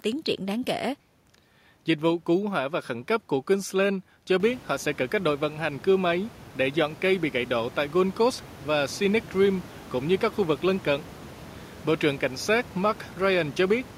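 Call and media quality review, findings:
No faults found in the signal chain; the speech stays well above the background room noise, which rises by about 20 dB somewhere around 4.5 s yet still sits about 21 dB below the speech, so it belongs to the recording environment rather than the system.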